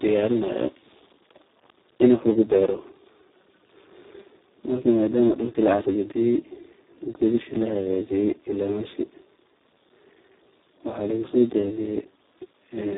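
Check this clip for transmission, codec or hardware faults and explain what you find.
One codec fault runs through the whole speech clip. The Speex codec here is at a low setting with heavy damage, consistent with a bitrate near 4 kbps. With so few bits for the excitation, speech turns hoarse and noisy. Nothing is present above 3.8 kHz, so it sounds narrow and muffled.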